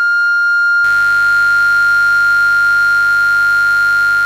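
From 0.84 s to the end of the music there's mains buzz: sharp switching spikes on the 50 Hz supply, twice per cycle, leaking in through something like a dimmer or rectifier. It sits fairly far below the music but stays audible, a steady raspy buzz with harmonics climbing well up.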